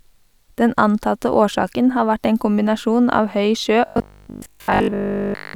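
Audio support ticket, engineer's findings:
Robotic sound from repeated short buffers, 3.86 to 5.54 s. Speech collapses into a rigid metallic buzz at 50 Hz, still loosely tracking the words. Fixed pitch fits a 20 ms buffer looping. Essentially the whole span is repeated material. Real audio skipped meanwhile. Component: likely the playback or receive buffer starving, with the last block replayed to fill gaps.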